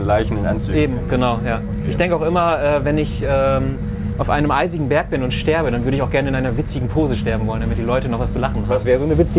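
Nothing here goes wrong: the sound comes through a telephone-style call link with its usual narrow band, everything above about 4 kHz gone as you'd expect from G.711, and no dropouts, glitches or other trouble along the way.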